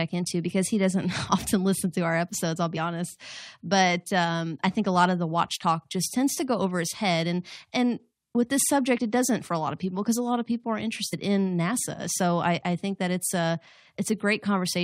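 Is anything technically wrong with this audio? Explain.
Yes, there are compressed frames skipped in this speech, at 8.97 s after "and and with this" and at 11.12 s after "lot of people are". The decoder drops whole 21.3 ms frames, so the audio jumps ahead about 40 ms, then about 70 ms, which points to two and three lost frames.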